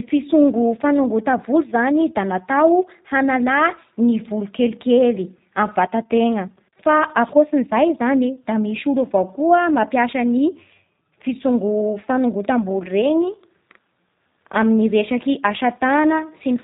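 From start to end, the speech carries G.729 codec damage, plainly audible throughout. The codec rebuilds each 10 ms frame from a vocal tract filter, a pitch predictor and a few pulses, which fits an 8 kbit/s rate. Nothing above 4 kHz survives, so the sound is muffled, rough and synthetic.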